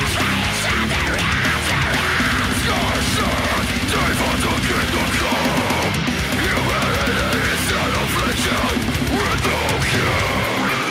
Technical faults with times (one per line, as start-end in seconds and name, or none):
none